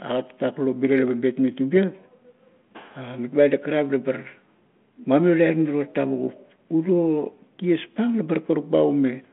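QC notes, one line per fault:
No faults heard in this clip.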